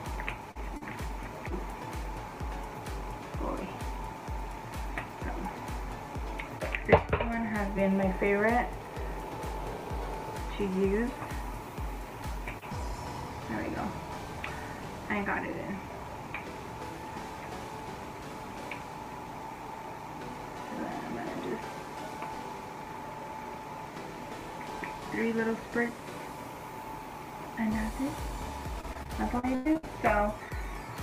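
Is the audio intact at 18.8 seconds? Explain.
Yes, the audio at 18.8 seconds is intact, with no fault audible at that moment.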